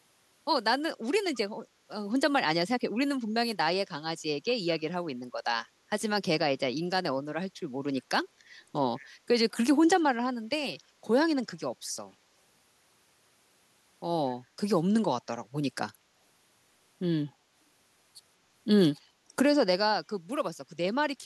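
Speech with faint, delayed copies of the voice trailing it by 200 ms, well below the main signal, at 1.34–1.38 s, 4.46–4.68 s, 7.96–8.00 s and 8.96–9.07 s. This echo leak likely comes from a far-end echo canceller letting loudspeaker pickup return.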